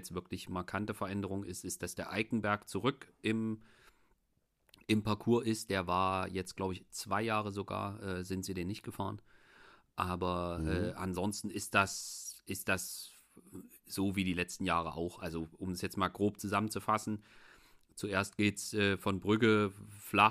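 Speech, and nothing technically wrong with it.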